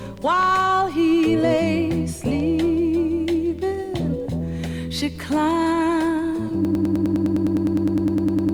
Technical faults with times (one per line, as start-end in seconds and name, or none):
6.65-8.54 broken-record loop